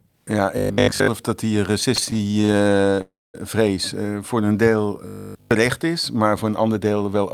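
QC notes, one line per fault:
0.58 to 1.08 s, robotic sound from repeated short buffers: speech turns to a hard 50 Hz buzz just before "dat die", most of it repeated material, likely a 20 ms buffer looping.
1.95 to 2.99 s, repeated stalls (stutter): 22 little gaps, longest 29 ms, about a third of the span filled in, so it drags and stutters though nothing's lost.
3.01 to 3.36 s, call audio freeze: about 0.33 s held up, tail of sound stretched then silence for roughly 0.21 s, likely packets stuck in transit; picks up where it stopped.
4.40 to 4.70 s, jitter buffer slow-down: 56 ms added by repeating pitch periods, running at 84% speed, same pitch, so sounds get drawn out.
5.07 to 5.51 s, robotic sound from repeated short buffers: nearly everything here is repeated, giving a steady metallic 50 Hz buzz right before "is maar voor een", likely short buffers looping.
6.61 to 7.24 s, jitter buffer speed-up: after "is maar voor een" roughly a tenth of a second trimmed out, playing at 113% with pitch unchanged, so it sounds hurried.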